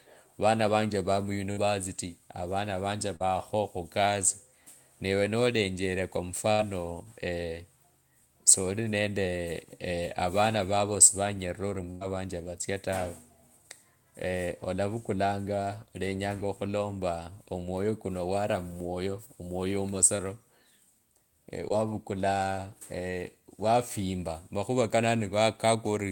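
Speech in this recording is broken up in six places. At 1.51–1.66 s, 6.52–6.61 s and 11.91–12.03 s the sound stalls into a held buzz or fading hiss before jumping ahead. These are bursts of packet loss: 60 to 100 ms of audio never arrived, and the receiver stretched the last sound across the gap, for about 56, 66 and 101 ms. Briefer smears or wobbles at 3.16–3.22 s, 20.17–20.21 s and 21.69–21.72 s come from short concealed packet loss. In each, 20 to 40 ms went missing, and the decoder patched the hole with 14 to 41 ms of extrapolated sound before blending back.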